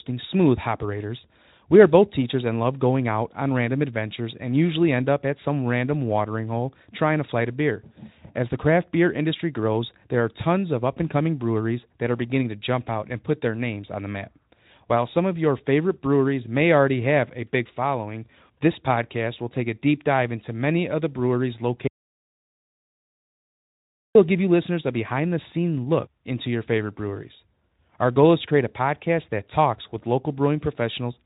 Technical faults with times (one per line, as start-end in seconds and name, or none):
21.87-24.15 audio dropout to silence